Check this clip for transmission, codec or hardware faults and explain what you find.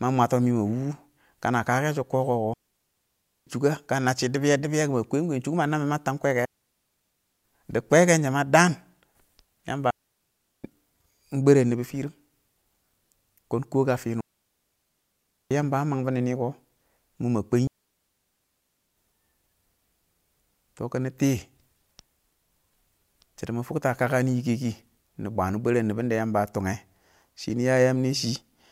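The speech has five digital wireless dropouts, at 2.54–3.47 s, 6.45–7.44 s, 9.91–10.64 s, 14.21–15.51 s and 17.67–18.97 s, lasting 0.7 to 1.3 s. Each time the receiver lost too much of the link's data and muted, cutting to near silence with no noise burst. The waveform shows flat gaps; the spectrogram shows clean blank columns.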